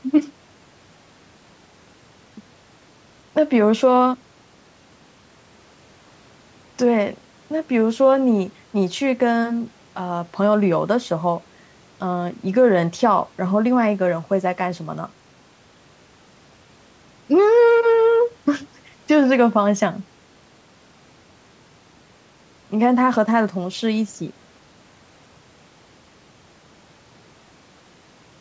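Nothing stood out on listening to this speech, which carries the sound of a call's microphone processing, with nothing above 8 kHz and the lowest bass taken out.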